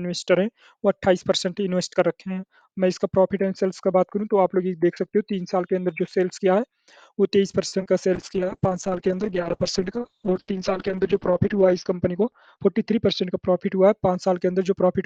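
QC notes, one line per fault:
7.67 to 7.74 s, short stall from a late packet: a packet arrived late and the buffer ran dry, so the last sound is held about 50 ms before resuming at the same point. Nothing is lost, but the playout delay grows by 50 ms.
7.80 and 7.83 s, short concealed packet loss, two in a row: about 40 ms of audio never arrived. The receiver extrapolated the preceding sound to cover the gaps, which leaves a brief smear or wobble.
8.16 to 14.92 s, call bitrate drop: the bandwidth estimate fell and the encoder coarsened sharply. The top end drops from about 20 kHz to about 6 kHz, giving a muffled, watery sound that fits a rate near 7 kbps. It is worst for about 3.5 s before recovering.
12.07 to 12.79 s, jitter buffer speed-up: the receiver trimmed pitch-period slices totalling about 50 ms to shrink excess buffered delay. Playback runs about 7% fast at unchanged pitch and sounds hurried.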